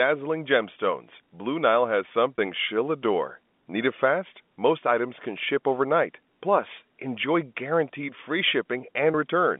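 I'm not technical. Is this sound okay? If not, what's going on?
No. At 2.36 to 2.38 s, just before "she'll adore", and again at 9.12 to 9.14 s, there's packet loss with pitch repetition. A tiny piece of the call went missing, and the phone filled it by repeating the last bit of voice. Instead of a silent dropout, you hear a very brief held, slightly buzzy sound. The gap is about 20 ms, which fits a couple of lost packets. The narrow, phone-like tone throughout is ordinary G.711 telephone coding.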